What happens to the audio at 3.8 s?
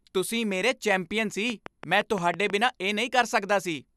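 At 3.8 s the speech carries on cleanly, with no dropout, click, distortion or other fault at that moment.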